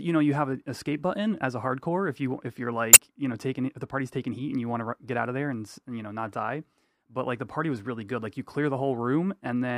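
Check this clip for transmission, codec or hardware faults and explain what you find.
There's one glitch in this speech clip, at 2.93 to 2.96 s: damaged data in the compressed stream. A short stretch of the encoded data is corrupt, so the decoder loses frame sync and hunts for the next header. You hear it as a quick glitch, about 30 ms long.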